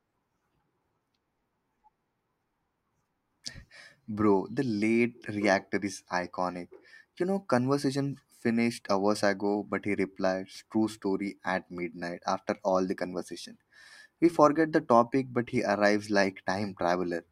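A speech recording with no technical faults audible anywhere.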